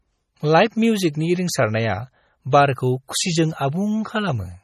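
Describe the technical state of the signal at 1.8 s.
At 1.8 s the speech carries MP3 compression damage, present throughout the clip. Nothing remains above 15.4 kHz, and weak frequency lines drop in and out between frames, giving a heavy watery, swirly texture, likely from encoding at a low bitrate around 32 kbps.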